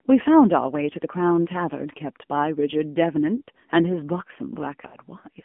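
Throughout, the speech carries the AMR narrowband mobile codec sound. The band is confined to roughly 200 Hz to 3.4 kHz, and the low-bitrate vocal-tract model leaves plainly audible buzzy, synthetic damage, which fits a low mode around 7.4 kbps.

From 4.88 to 4.98 s, lost AMR speech frames cause a brief warble and dip. The decoder stretches the last good pitch and vocal-tract settings at falling gain to cover about 40 ms, which fits two missing 20 ms frames, then resumes weak or rough for a moment.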